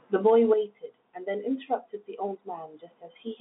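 Nothing goes wrong anywhere in this one, and the only thing to hear is the ordinary narrow sound of a telephone line, with the speech held to roughly 200 Hz to 3.6 kHz and nothing above 3.8 kHz, just as you'd expect from standard G.711 telephone coding.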